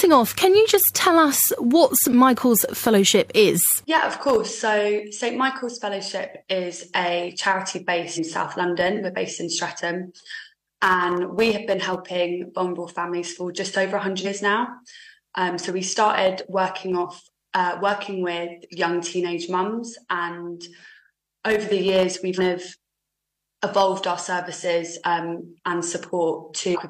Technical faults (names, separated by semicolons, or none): compressed frames skipped